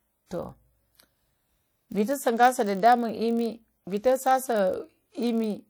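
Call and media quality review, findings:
Ringing, washy speech with hiss that swells and fades with the signal, throughout; codec damage plainly audible. Likely WMA compression at a low bitrate around 48 kbps: long transform blocks smear quantisation noise over tens of milliseconds, weak components dropped.

Steady 46.9 Hz buzz under the speech for the whole clip. Block size mismatch (padded): the writing stage delivers short blocks, the reading stage zero-fills the remainder, inserting a gap every block. Rate fits a 1024-sample read buffer. Slowdown only 0.999x.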